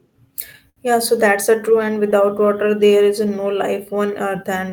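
Throughout the speech runs clock drift between sender and receiver: the sender's clock ticks roughly five percent slow, so the receiver's jitter buffer keeps draining. On a waveform this leaves no single scar, only a faintly stretched cadence and small irregular seams spread across the whole recording.

From 0.28 s to 4.71 s, repeated timing corrections answer that drift. The receiver repeats short slices, playing at about 98% speed and adding about 100 ms overall. Each repeat is a tiny hiccup; on a spectrogram, formant patterns briefly duplicate at uneven spacing.

At 0.69 s to 0.78 s comes a short stall from a late packet. The buffer ran empty, so the receiver held the last sound for 69 ms until the packet arrived, losing nothing. It sounds like a frozen, slightly buzzy drawn-out moment; the spectrogram shows flat horizontal smearing, the waveform a looped stretch.

Between 3.28 s and 4.57 s there are scattered short gaps, around four of them, each patched by continuing the preceding sound, the longest about 10 ms. 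They come across as brief ticks or smears. The spectrogram shows thin vertical seams where harmonics briefly smear or repeat.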